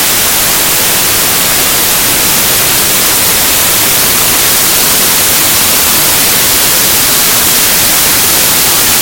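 Samples built from the wrong bytes run through the whole clip. The bytes of each sample are assembled in the wrong order or alignment, so the rapidly changing low bits land in the high part of every value. The result is loud, harsh broadband noise throughout.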